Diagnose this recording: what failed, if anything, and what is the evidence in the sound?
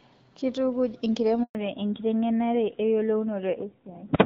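At 1.43 s the speech drops out for 120 ms, going silent until 1.55 s. This is a handover gap at the network stage: during the switch from one link to another no speech frames arrived, so nothing was decoded for that stretch. Unlike a dropped packet concealed by the decoder, there is no smeared or repeated sound filling the hole. Unlike a buffer underrun, it happens once and is followed by a change in the sound itself.

From 1.55 s to the end, nothing above 4 kHz remains, and the speech sounds duller and rougher than before the gap. This is a fallback to narrowband, a codec-stage change brought on by the handover. The call left HD Voice, whose wideband coding at a rate that fits 12.65 kbit/s sounded lightly coded, for an older narrowband codec, most likely AMR-NB at around 7.4 kbit/s. A simple low-pass filter would not add this roughness or begin exactly at a handover.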